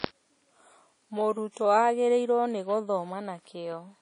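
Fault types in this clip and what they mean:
WMA compression: The speech carries plainly audible transform-codec damage, likely from an early Windows Media Audio encoder. Quantisation noise is smeared over long blocks, so sounds ring and turn washy. A hiss rises and falls with the speech. Weak detail has been dropped out. Nothing is present above 10.1 kHz, so the top end sounds dull. The amount of damage fits a low bitrate of around 32 kbps.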